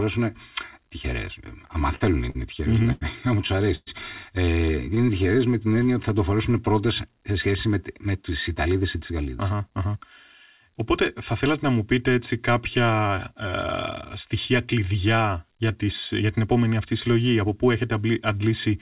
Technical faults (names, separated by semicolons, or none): channel delay (comb filtering); repeated stalls (stutter); short stall from a late packet; call audio freeze; jitter buffer slow-down; jitter buffer speed-up